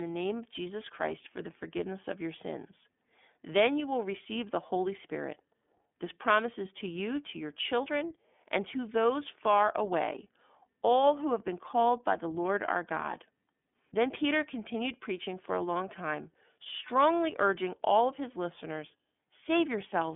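From start to finish the speech goes through the iLBC codec. Nothing gets past about 3.7 kHz, and the line sits roughly between 200 Hz and 3.5 kHz. Each 30 ms frame's excitation is coded on its own, so there's a plainly rough, synthetic grain, which fits the 13.33 kbps mode.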